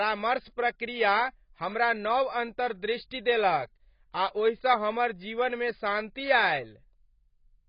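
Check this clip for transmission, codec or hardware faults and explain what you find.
Heavy AAC compression damage runs through the whole clip and is the likely cause of what is heard. Nothing remains above 5.1 kHz, and the speech is dull and smeared, with a warbling, fizzy texture on sibilants and held vowels. The encoder dropped the upper bands and quantised the rest coarsely against a hearing model, which fits an AAC-LC stream at a very low bitrate, around 16 kbps. A plain low-pass filter would remove the top cleanly, without this swirling, watery texture.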